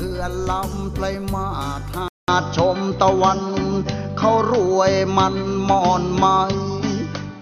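At 2.08 s the sound breaks off for 0.2 s, then returns duller and boxier, with nothing above 6.4 kHz, a level shift of around 5 dB and a faint new noise floor. A spectrogram shows a flat ceiling from there; the waveform, a brief gap. Likely cause: input switched to a poorer device.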